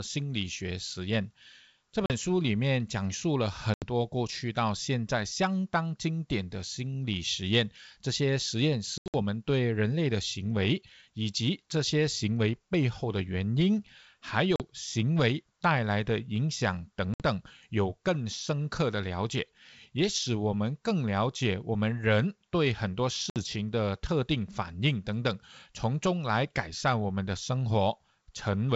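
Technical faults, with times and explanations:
2.06–2.13, 3.74–3.87, 8.98–9.15, 14.56–14.62, 17.14–17.22 and 23.30–23.44 s, packet loss on an ADPCM call: 40 to 80 ms silent gaps, scattered over 160 ms at 9 s. These are hard-edged blank strips on the spectrogram and flat lines on the waveform. Afterwards the decoder's predictor and step size lag the sender, so the sound returns slightly distorted before settling.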